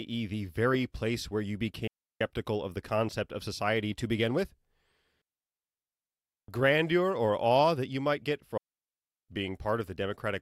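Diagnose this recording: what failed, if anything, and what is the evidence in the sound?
Digital wireless dropout in the wireless transmission link: the speech cuts to near silence at 1.87–2.21 s, 5.22–6.48 s and 8.58–9.29 s. The receiver, losing too much data, mutes with a very short fade, leaving flat waveform stretches and clean blank spectrogram columns without noise bursts.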